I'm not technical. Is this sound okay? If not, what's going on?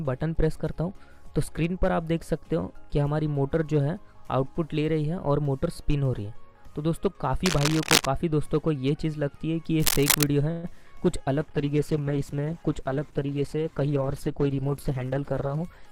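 No. Cable scratch noise comes in at 7.46 to 8.06 s and again at 9.79 to 10.27 s. These are bursts of scratching or rustling, roughly as loud as the sound itself. Their likely cause is a worn cable or connector being moved, so its electrical contact flickered.

A call audio freeze happens at 10.51 s and lasts about 0.12 s. The sound stretches into a brief fading buzz or hiss and then carries on where it stopped, so nothing is lost. The likely cause is delayed network data leaving the receiver briefly empty-handed.

A call bitrate drop runs from 11.41 to 15.71 s. The connection had far less room, so the sound was squeezed much harder. The audio turns coarse, and it loses its brighter high end until the end of that stretch.

A jitter buffer speed-up runs from 13.80 to 15.18 s, inside that rough stretch. The receiver had built up a backlog and trimmed away about 0.15 s in many tiny snips. The sound runs about 9% faster without changing pitch, so it feels hurried.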